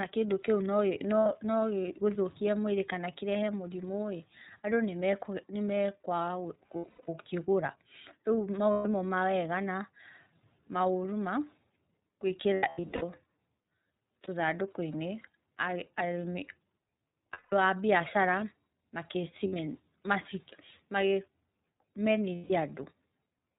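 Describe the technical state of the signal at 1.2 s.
At 1.20 s there are lost iLBC frames: a gap running from 1.20 to 1.26 s, 60 ms long, which fits two missing 30 ms frames. The decoder fills the hole by repeating the last pitch cycle blended with noise, so the speech briefly turns into a held, faintly buzzy, breathy vowel before snapping back cleanly. On a waveform this shows as a short run of near-identical repeated periods; a spectrogram shows frozen, smeared harmonics with a noisy wash.

That moment sits inside audio carried through the iLBC codec, a narrowband VoIP coder whose damage here is plainly audible. Each frame's excitation is coded independently, consistent with the 30 ms, 13.33 kbps mode, giving the speech a slightly rough, synthetic edge. Nothing above 4 kHz survives, so a spectrogram shows a hard ceiling at 4 kHz with empty space above it, and the waveform carries slightly coarse, frame-to-frame texture.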